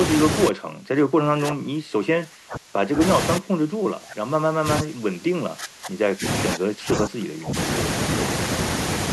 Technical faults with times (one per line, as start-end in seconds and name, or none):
0.50-3.01 speech suppressed in double talk
3.38-6.24 speech suppressed in double talk
6.54-7.56 speech suppressed in double talk